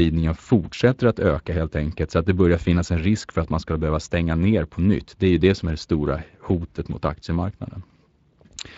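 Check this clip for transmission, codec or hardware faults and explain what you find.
The speech has been through the Speex codec for the whole clip, with a sound that fits a bitrate near 20 kbps. The CELP coder has too few bits to model the excitation accurately, so the voice comes through plainly grainy, noisy and hoarse.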